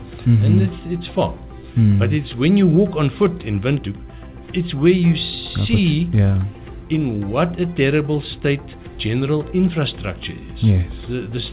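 No technical faults are audible.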